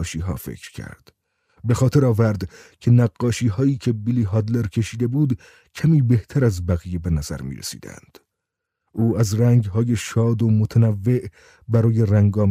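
Nothing here sounds wrong; the audio just runs along steadily with no glitches or hiccups to point to at any moment.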